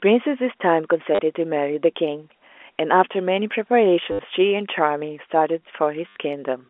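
At 1.15 to 1.19 s, 4.12 to 4.19 s and 6.08 to 6.16 s the speech stutters robotically: packet loss with the last packet repeated. Gaps of 40, 70 and 80 ms were filled by replaying the previous chunk, which fits 10 ms packets, so each run buzzes near 100 Hz. That buzz is what sets it apart from a silent dropout. Around it, the G.711 telephone coding is audible as the usual 300 Hz to 3.4 kHz narrowband sound.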